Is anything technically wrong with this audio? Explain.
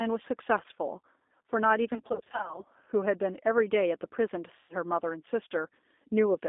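Yes, there are two faults.

The G.729 codec runs throughout. It squeezes the speech to 8 kbit/s by rebuilding each frame from a vocal-tract filter, a pitch predictor and a few pulses. Nothing below 250 Hz or above 3.6 kHz survives, and the voice sounds plainly rough and synthetic.

VoIP packet loss concealed by the speech codec occurs from 1.94 to 2.64 s, where 320 ms of audio is missing in gaps of up to 40 ms, which points to 20 ms packets. It happens again from 4.57 to 4.73 s, losing 120 ms. The decoder fills each gap by extending its last pitch and filter at falling gain, so the speech smears into a fading buzz and stays weak briefly after packets return.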